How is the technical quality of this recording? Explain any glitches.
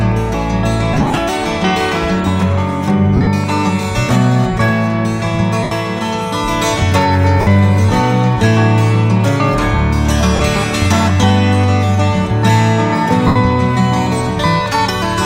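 The recording has six short breakups caused by lost LE Audio frames, at 0.93–1.18, 3.16–3.27, 5.63–5.72, 7.41–7.47, 10.36–10.40 and 13.27–13.36 s. Each lasts roughly 40 to 140 ms. The LC3 decoder fills the missing frames by repeating the last spectrum with scrambled phase, so tones smear into noisy hiss instead of dropping to clean silence the way a plain dropout would. The losses at 0.93 s and 3.16 s come in short scattered runs, and the missing time fits 7.5 ms frames.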